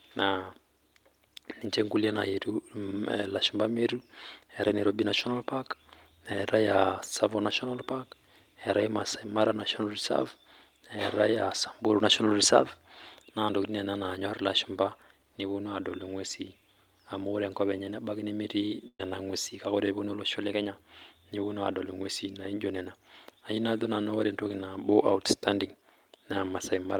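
At 18.87 s the speech breaks up in a burst of packet loss lasting until 19.01 s. The receiver fills the gap for about 117 ms by repeating the last sound and fading it, so a buzzy or hissy smear replaces roughly 120 ms of lost speech, ending in about 60 ms of near-silence before the talk resumes further along. On a spectrogram, frozen horizontal bands fade into a dark patch. The waveform shows a repetitive, shrinking envelope.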